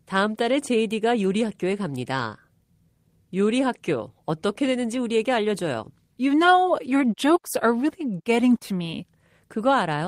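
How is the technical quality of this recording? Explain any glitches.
Nothing glitchy turns up here at all; the speech just rolls along with no dropouts, clicks or stutters to point to.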